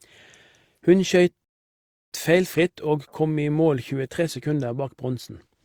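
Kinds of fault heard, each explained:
Rebuffering stall: the player ran dry of downloaded audio, so the speech drops into dead silence from about 1.44 to 2.12 s, then picks up exactly where it left off. Nothing's missing, but roughly 0.68 s of extra time gets tacked on.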